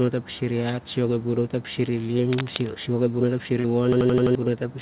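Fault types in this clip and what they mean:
Cable scratch noise: From 2.22 to 2.71 s a dense, uneven rustling sits over the speech at nearly the level of the speech itself, about 5 dB below it. It likely comes from a worn cable or connector being moved. Its contact resistance jumps around rapidly, and every jump adds a ragged burst of noise. The effect is half a second of scratching laid on top of the talker.
Short concealed packet loss: At 3.60 s about 40 ms of the call never reached the decoder in time. The receiver covered the gap by carrying the last sound forward for around 39 ms and then blended back into the real audio by 3.67 s. The result is a brief smear or wobble where the speech should continue cleanly, rather than a silent hole.
System hang loop: From 3.93 to 4.35 s one 85 ms slice of audio repeats exactly, five times, at about 11.7 per second. That rate fits a 4096-sample ring buffer. 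The computer or driver stalled while the sound hardware kept cycling the same buffer, so the listener hears a rapid machine-gun stutter. Roughly 0.4 s of real speech is replaced by copies, over a call path that carries nothing above 4 kHz.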